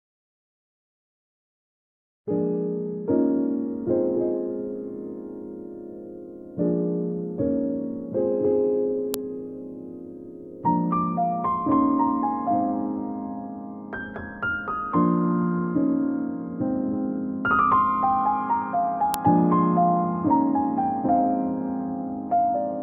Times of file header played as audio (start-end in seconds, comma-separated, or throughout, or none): 9.14, 19.14